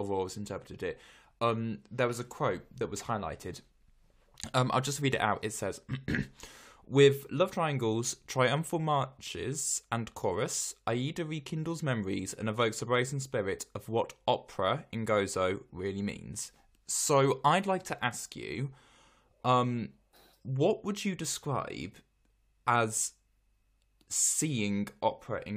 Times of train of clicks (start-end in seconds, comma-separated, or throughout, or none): none